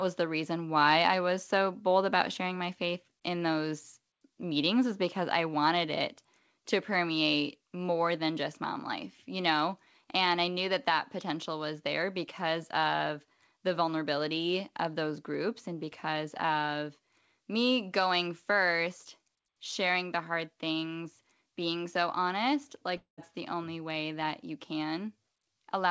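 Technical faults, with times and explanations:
22.97 to 23.20 s, long network dropout: right after "things being so honest" the sound breaks off. For about 210 ms nothing new gets through, so the receiver keeps the last sound going as a fading buzz for roughly 0.2 s, and about 130 ms of that gap ends up as near silence. Then it picks up again at "the only way that", with the lost piece simply gone. A stall in packet delivery is the likely cause, and you can hear the patched-over tail through the G.722 call codec, which leaves nothing above 8 kHz.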